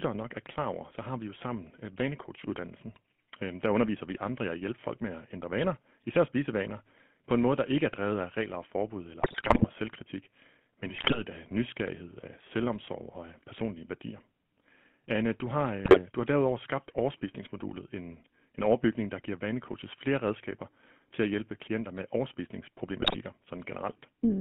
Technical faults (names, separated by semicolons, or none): GSM full-rate codec; GSM bit errors